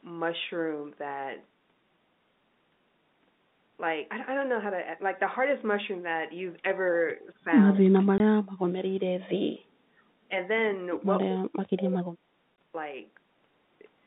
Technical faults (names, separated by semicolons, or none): speech suppressed in double talk; packet loss filled with silence